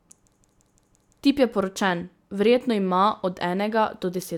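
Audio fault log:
0.34–1.20 s: system hang loop. A single 171 ms slice of the speech repeats exactly five times, giving a machine-gun stutter at about 5.9 Hz. The slice length fits an 8192-sample ring buffer that the playback hardware kept cycling through while the computer or driver was frozen and not refilling it. Because the buffer is long, each pass is heard as a distinct repeat rather than a buzz. The speech then resumes with essentially nothing missing.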